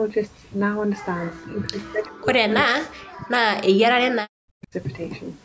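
From 1.32 s to 4.74 s the talker keeps ducking, dropping out in pieces for roughly three seconds in total, and at its worst the level falls by something like 40 dB, so parts nearly vanish. That is most likely speech suppressed in double talk: the far end was talking at the same time, and the echo canceller, unable to separate this voice from the loudspeaker echo, turned it down with the echo. The band tops out at 8 kHz throughout.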